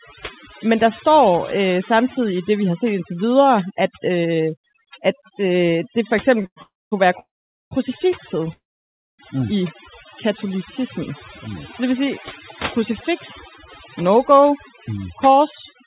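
Speech heard through a narrowband call path, with nothing above 4 kHz (consistent with G.711 at 64 kbps), and heavy-handed overdone noise removal throughout. The suppressor drives whole frequency bands to near zero whenever they approach its noise estimate, so the background collapses into near silence dotted with twinkling specks. Softer parts of the voice vanish too. On a spectrogram the background appears as dark gaps scattered with isolated bright flecks.

At 6.42–6.46 s a short stall from a late packet holds the last sound about 21 ms too long before continuing from the same point. A waveform shows the cycle briefly repeated, with nothing lost.

Four call audio freezes follow, at 6.46–6.58, 6.62–6.94, 7.20–7.73 and 8.53–9.21 s. They are likely caused by held-up packets emptying the jitter buffer. Each stretches the last sound into a fading buzz, then drops into silence lasting 60, 220, 440 and 580 ms respectively. 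Speech resumes where it stopped, so these show as progressively wider flat gaps in the waveform.

From 14.00 to 15.84 s a jitter buffer speed-up trims short pitch-period slices, roughly a tenth of a second in total. The result is speech running about 6% faster at unchanged pitch, sounding slightly hurried, with harmonics keeping their spacing on a spectrogram.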